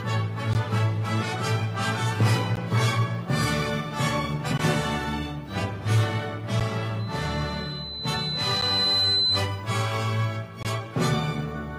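Short, hard-edged dropouts to silence cut into the sound at 0.53, 2.56, 4.58 and 6.60 s, each lasting about 10 to 17 ms, repeating every 2 s. This is a gap between stream segments: the time stamps of consecutive segments leave a small hole, and the player fills it with silence. No audio is lost.

From 6.99 s a single piercing tone at 4 kHz swells over roughly two seconds to about 5 dB above the programme and holds until 9.47 s. This is a loudspeaker feedback squeal: the microphone hears its own loudspeaker, and at 4 kHz the loop gain exceeds one, so that frequency keeps growing.

During the squeal, another gap between stream segments interrupts the sound at 8.61 s for about 10 ms. The final gap runs from 10.63 to 10.65 s, about 21 ms, keeping the same 2-second rhythm.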